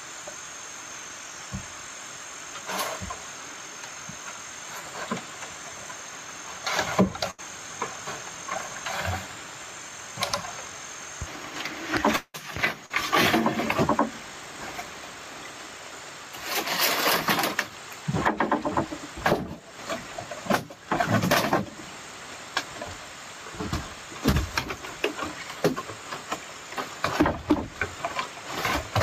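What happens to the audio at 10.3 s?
At 10.3 s the gain pumping that runs through the whole clip is at work: input gain likely set far too high, with a fast limiter clamping each loud sound. The gain swings by around ten decibels, leaving the sound squashed.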